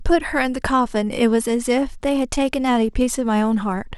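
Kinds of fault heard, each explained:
Bluetooth SBC bit pool drop: From 1.44 s to the end, the speech loses its treble and takes on a gritty, grainy noise, which fits the link cutting SBC's bit pool from 31 to about 16, near 110 kbps, starving the upper sub-bands and coarsening the rest.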